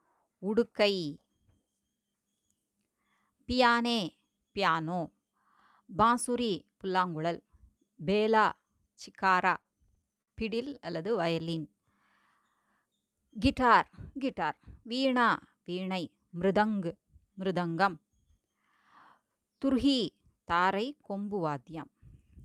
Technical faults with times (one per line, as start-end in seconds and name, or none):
9.61-10.30 repeated stalls (stutter)
11.32-11.82 jitter buffer slow-down